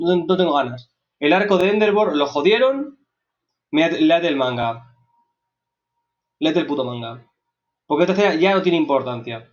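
At 1.61, 4.63 and 7.65 s, roughly every 3 s, there is a tick with a brief stutter. This is overlapping chunks. Each new 3-second block begins 20 ms before the previous one ended, so that 20 ms of sound plays twice at the join. On a waveform, each seam shows a discontinuity followed by a repeated 20 ms pattern. On a spectrogram, a thin vertical broadband line appears there. It reaches up to the 8 kHz ceiling set by the call path.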